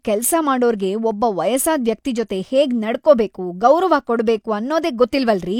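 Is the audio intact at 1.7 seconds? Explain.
Yes, the speech at 1.7 seconds is intact, with no audible fault at that moment.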